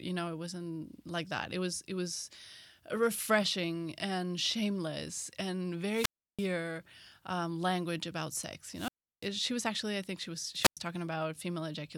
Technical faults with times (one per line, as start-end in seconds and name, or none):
5.86-6.53 wireless microphone squelch dropout
8.73-9.30 wireless microphone squelch dropout
10.60-10.77 wireless microphone squelch dropout